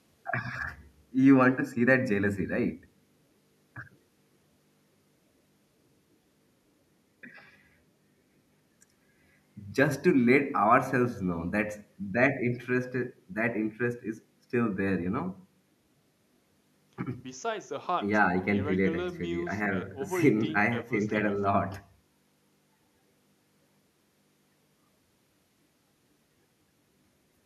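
Speech recording with no technical fault to report. Nothing audible anywhere in the clip calls for a time stamp or a cause.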